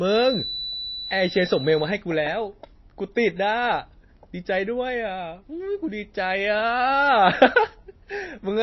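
A loudspeaker-to-microphone loop sitting just at the edge of oscillation is the likely cause of a feedback whistle from 0.0 to 2.0 s. The loop keeps ringing at a single frequency without building into a howl, so a thin, steady tone at 4 kHz hangs behind the speech, around 10 dB below it and swelling and fading slowly in level, then disappears at the two-second mark.

Running through the whole clip is damage most likely from heavy MP3 compression, with bit starvation pointing to a low bitrate in the region of 24 kbps. Short of bits, the encoder has removed everything above 5.8 kHz and switches weak frequency components on and off from frame to frame. The speech sounds dull and watery, with a swirling, metallic edge on sibilants and consonant onsets smeared rather than crisp.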